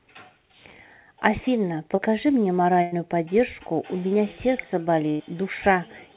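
At 1.96 to 2.00 s the speech gives a brief smear, a tiny wobble where the sound briefly continues itself. That is short concealed packet loss: about 20 ms of audio arrived too late, so the receiver carried the preceding sound forward for 17 ms before blending back in.

From 2.82 to 2.94 s, and again from 5.10 to 5.22 s, the sound turns into a held, fading continuation for about 100 ms, then picks up further along. Each is a burst of packet loss: about 100 ms went missing and was filled by stretching and attenuating the last sound, all within a narrowband call path with nothing above 4 kHz.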